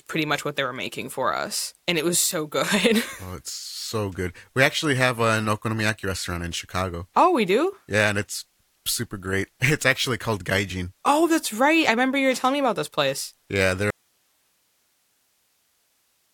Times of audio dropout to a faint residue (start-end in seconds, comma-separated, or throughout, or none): 13.90-16.33